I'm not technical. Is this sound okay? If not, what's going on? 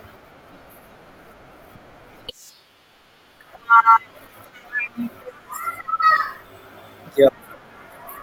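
No. The speech jumps forward at 0.47 s, 4.86 s, 6.02 s and 7.27–7.29 s. These are compressed frames skipped: chunks of 21.3 ms were lost or rejected, dropping about a twenty-fifth of a second first, then about a tenth each time.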